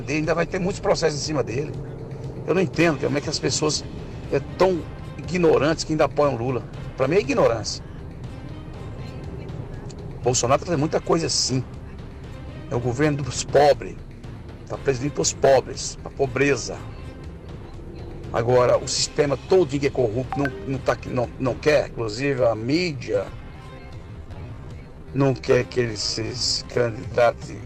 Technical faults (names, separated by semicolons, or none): time-stretched section